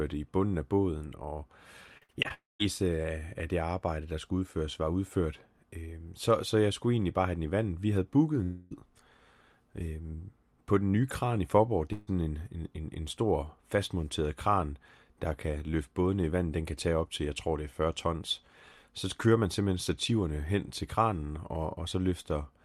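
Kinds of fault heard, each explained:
Repeated packet loss (robotic sound): from 1.97 to 2.32 s, five short gaps, the longest 55 ms, get patched over, so this stretch of speech turns choppy and robotic.
Long network dropout: at 2.34 s the sound smears into a fading buzz or hiss then goes silent, and at 8.43 s about 0.3 s is lost, likely from a network dropout.
Burst of packet loss: around 11.93 s roughly 140 ms goes missing, the last sound is held and fades, then speech resumes with a chunk gone.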